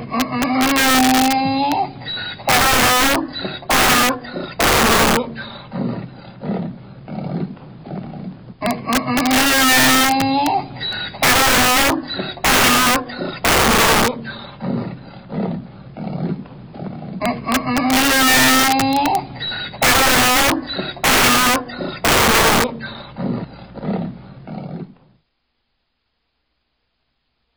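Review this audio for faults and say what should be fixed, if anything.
Integer overflow runs through the whole clip: loud peaks pushed about 3 dB past full scale wrap to the opposite sign instead of stopping at the limit, so roughly one sample in twenty snaps across the entire range. Clipping would flatten those peaks into dull buzzy distortion, but here they explode into sharp, violent cracks. To prevent it, use saturating arithmetic or a limiter before the final integer conversion so overloads clamp rather than wrap.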